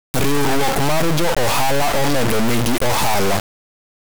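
From start to finish the speech is ruined by an integer read as float fault. The buzzing points to 32-bit integer samples being interpreted as 32-bit floating-point values. The reinterpreted bit patterns come out as near-zero, invalid or enormously over-range numbers, so the output slams between silence and the clipping ceiling. It is heard as a harsh, extremely loud square-wave buzz that collapses to silence wherever the signal becomes very quiet.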